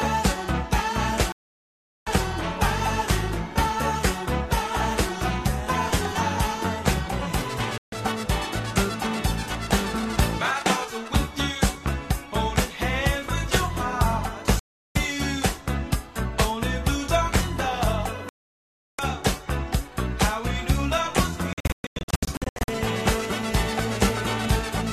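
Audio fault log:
1.32 to 2.07 s, digital broadcast dropout: sound cuts to silence for about 0.74 s, the receiver muting while frames failed, so that stretch is lost.
7.78 to 7.93 s, digital broadcast dropout: a brief 0.14 s hole of silence as the receiver mutes over failed frames, losing what was sent.
14.59 to 14.96 s, digital broadcast dropout: silence for about 0.36 s while the receiver lost good frames and muted until they returned.
18.29 to 18.99 s, digital broadcast dropout: sound drops out for about 0.70 s, the receiver muting through failed frames, and resumes later in the programme.
21.53 to 22.69 s, digital broadcast dropout: several short holes totalling about 0.74 s, none longer than 0.12 s, as the receiver repeatedly muted on failed frames.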